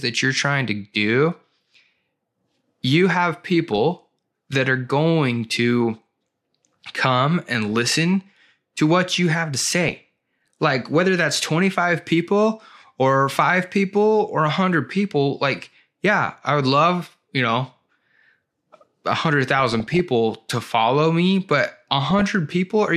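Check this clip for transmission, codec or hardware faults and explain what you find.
The clip has one fault, DAB burbling, at five points: 3.73 to 3.78 s after "you have", 7.68 to 7.89 s, 9.64 to 10.08 s after "what you have to", 19.59 to 19.99 s just before "to follow me but", and 22.10 to 22.33 s. Weak reception lets a few bits per thousand slip past error correction into the MP2 stream. Corrupted samples put short blips of noise in single sub-bands, and corrupted scale factors make sub-bands leap in level for up to a frame, producing burbling blips over the speech.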